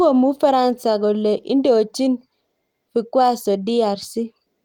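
No technical faults can be heard anywhere in the speech.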